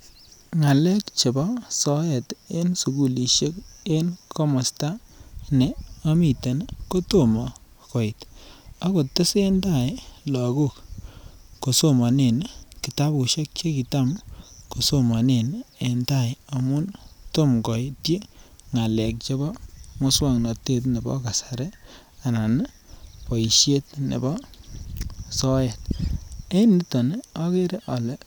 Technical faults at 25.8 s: block of digital silence

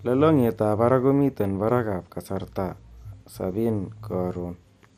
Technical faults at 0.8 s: MP2 compression

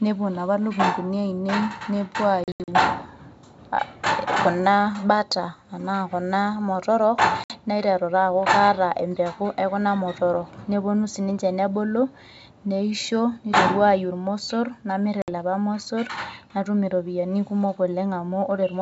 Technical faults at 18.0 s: none

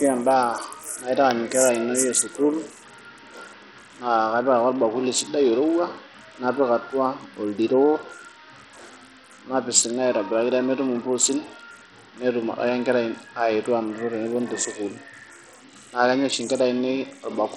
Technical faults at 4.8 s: Bluetooth SBC compression

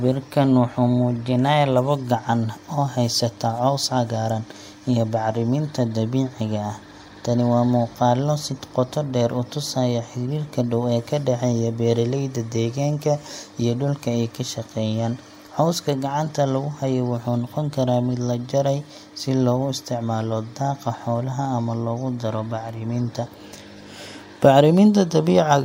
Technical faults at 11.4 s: none

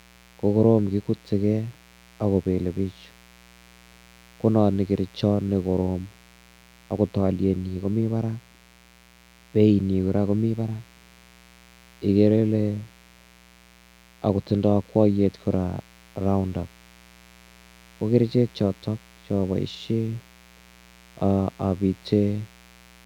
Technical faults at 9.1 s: mains buzz

